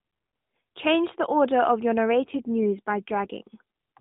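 From 2.11 to 3.31 s there is an AMR rate drop. The mobile link switched the AMR-NB codec to a lower mode that leaves fewer bits for the speech itself, consistent with a fall from 12.2 kbps to about 5.9 kbps. The bandwidth stays narrowband and nothing drops out, but the speech turns rougher and buzzier until the rate recovers.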